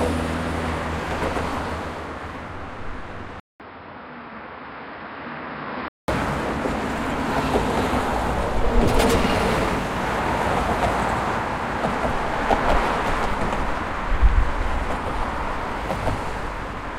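At 3.40 s the everyday sound drops out for about 200 ms, then returns duller and boxier, with nothing above 5.3 kHz, roughly 5 dB quieter, and with a faint new background hiss about 45 dB below the signal. The full, brighter sound comes back at 6.08 s. This is likely an input switched to a poorer device partway through, a narrower-band microphone or headset path with its own tone, level and noise, before the original input resumed.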